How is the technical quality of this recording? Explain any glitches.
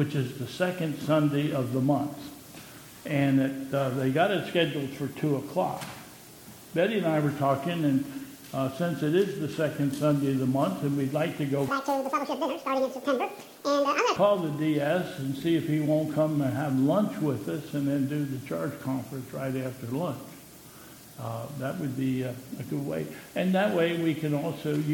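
There's one glitch. From 11.68 to 14.16 s the audio is read two samples at a time, giving double speed. Pairs of samples get treated as a single frame, so everything plays twice as fast and a full 12 semitones higher.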